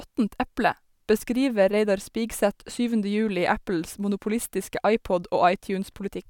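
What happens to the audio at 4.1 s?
Nothing goes wrong at 4.1 s; the speech there plays through intact, with no dropout, glitch or other fault.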